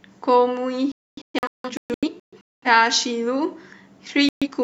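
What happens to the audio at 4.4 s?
The speech cuts out in a digital broadcast dropout. The gap runs from 4.29 s to 4.48 s, just under 0.2 s. The receiver stopped getting usable frames, either because the signal was lost or because frames failed their error check, so it muted the output. The sound drops to silence and returns when good frames arrive. The missing audio, roughly 128 ms of programme, fits a few lost frames. Nothing sent during the gap survives.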